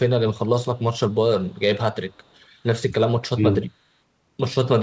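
Echo leak at 0.75–0.82, 0.99–1.16, 1.45–1.59 and 2.10–2.47 s: a very faint copy of the speech trails about 240 ms behind, in short scraps, likely from a far-end loudspeaker echo the canceller failed to remove.

Speech suppressed in double talk at 3.33–3.61 s: the talker's level dips sharply, by around 20 dB at its deepest, over about a fifth of a second. This is likely because the echo canceller mistook overlapping talk for echo and turned it down. The band-limited sound, with nothing above 8 kHz, points to a G.722 call path.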